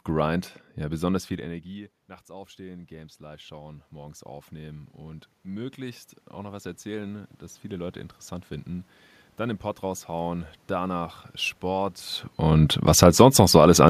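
The automatic gain control reacts after the talker moves away near 1 s, just after "ja besonders", and the input drops by about 21 dB. From 1.28 to 4.87 s the gain rises by about 8 dB, and from 5.47 to 8.05 s by about 5 dB more. Both times the voice and the room noise swell together.

When the talker moves again near 12 s, the gain control reacts. It lowers its gain by about 5 dB between 12.38 and 13.55 s, so the voice starts loud and then sinks along with its background.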